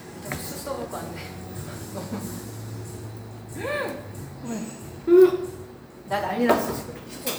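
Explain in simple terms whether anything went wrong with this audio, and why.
Nothing went wrong with this audio.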